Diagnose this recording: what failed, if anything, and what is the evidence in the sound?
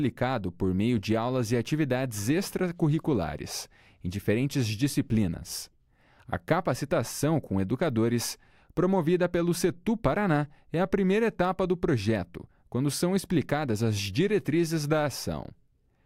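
Clock slip clicks run from 0.16 to 15.76 s as faint regular ticks, roughly every third of a second. The likely cause is two converters on unsynchronised clocks, around 70 ppm apart, so a single sample is dropped or repeated each time the drift accumulates.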